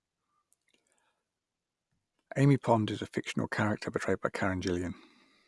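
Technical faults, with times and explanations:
No technical faults can be heard in this speech recording.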